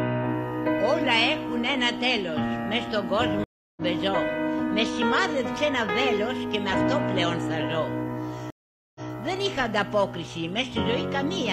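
At 3.44 s there's a stream reconnect: the connection drops, about 0.33 s of silence, then a fresh decoder picks up roughly 0.2 s further on. A second one hits at 8.50 s with about 0.45 s of silence, resuming 139 ms earlier so a bit of sound repeats.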